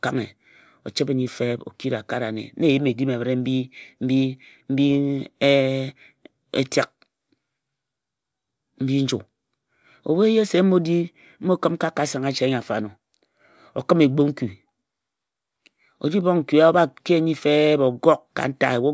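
No dropouts, clicks, level jumps or other transport or processing faults turn up anywhere in the speech.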